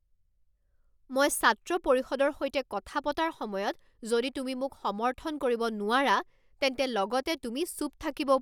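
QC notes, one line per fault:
No faults found in this speech recording.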